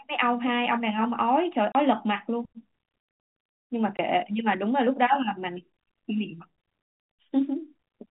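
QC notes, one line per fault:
1.72–1.75 s and 3.97 s, packet loss filled with silence: gaps of 30 and 20 ms fitting 10 ms packets, shown as flat waveform holes and blank spectrogram columns with hard-edged vertical streaks.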